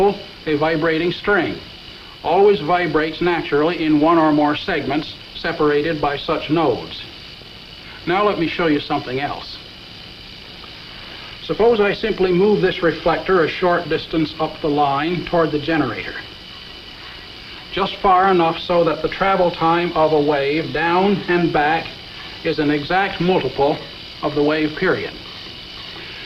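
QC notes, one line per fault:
No faults were heard anywhere in the clip. Nothing in the audio called for a QC entry.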